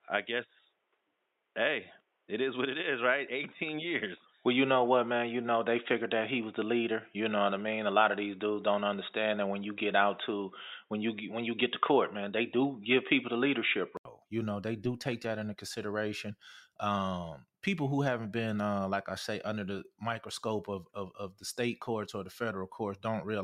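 From the start to 14.05 s, the speech is dull and boxy. Nothing reaches above 3.8 kHz, so sibilance and air are missing. A faint noise sits well below the speech, roughly 45 dB down. At 14.05 s there is a gap of 80 ms. Then the full band returns and the level shifts by a few decibels. This is likely an input switched to a poorer device, such as a headset in call mode, before recording moved back to the better microphone.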